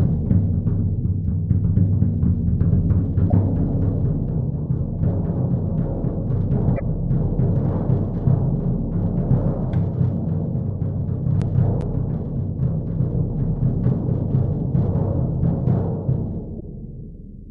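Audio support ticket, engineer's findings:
Damaged data in a compressed stream, three hits: short glitches at 3.28–3.34 s, 6.75–6.81 s and 16.58–16.63 s, each about 55 ms. Decoder side is where it shows. Bad bytes in the compressed stream, so the decoder misreads those frames, loses sync and hunts for the next valid header before the sound picks back up. Worth checking the source file or transport for corruption.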